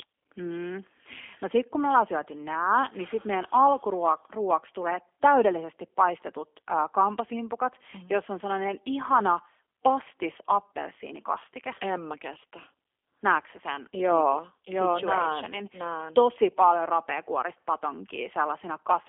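Speech runs through a G.729 codec for the whole clip. Nothing passes below about 300 Hz or above about 3.4 kHz, so it sounds thin and boxy. The rough, synthetic, plainly audible texture fits 8 kbit/s coding that rebuilds the voice from a model.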